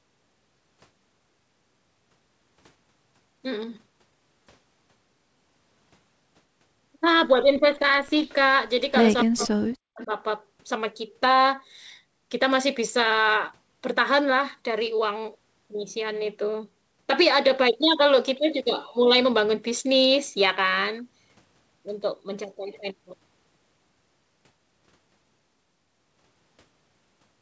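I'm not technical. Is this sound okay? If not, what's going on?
No. Echo leak: the other side of the call likely played this audio on a loudspeaker, and its echo canceller let some of it back through. You hear brief, faint repeats about a quarter-second late at 8.28–8.34, 9.19–9.25, 9.42–9.47 and 9.99–10.07 seconds. The one at 9.19 is the most noticeable.

Speech suppressed in double talk: when both sides spoke at once, the echo canceller likely could not tell the talker from the echo, so it turned both down. From 9.24 to 10.1 seconds the voice dips, nearly vanishing in places, for about 0.7 seconds in total.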